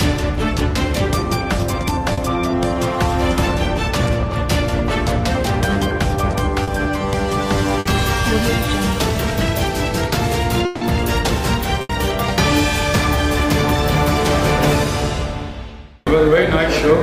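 What you've got here is audio carried over a lossy network path, and it trips up in a handful of spots. First, there's short concealed packet loss at 2.13 to 2.19 s and again at 6.63 to 6.69 s. In each case about 40 ms of audio never made it to the decoder in time, so the receiver papered over the hole by extending whatever was sounding just before, then eased back into the real signal. You hear it as a quick smear or wobble. Next come two bursts of packet loss, at 7.79 to 7.87 s and 11.81 to 11.91 s, where roughly 60 ms and then 80 ms went missing in a row. Here the concealment has to stretch further, so the last sound hangs on as a held buzz or hiss that dips in level. When the signal picks up again it's already moved on, and the stretch in between is simply gone. Between those two, at 10.65 to 10.83 s, there's a longer gap of about 160 ms. It's all filled with a decaying continuation of the previous sound, with no true silence, before the audio jumps ahead past the lost part. 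That pattern most likely comes from a long network dropout, where nothing arrived for that whole stretch and the receiver could only extend and fade what it last had.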